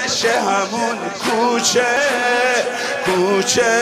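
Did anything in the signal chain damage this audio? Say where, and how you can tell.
Yes. At 1.96 s a CD skip in the playback stage causes a tick and a very brief mute, roughly two milliseconds, after which the audio resumes from a different point. The laser jumped across the disc's spiral by whole turns. Unlike a buffer dropout, the material doesn't simply pause and continue; it jumps.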